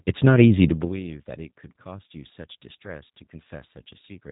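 Throughout, the speech has passed through a G.729 codec, consistent with 8 kbit/s. Nothing above 3.8 kHz survives, and the voice sounds plainly rough and synthetic.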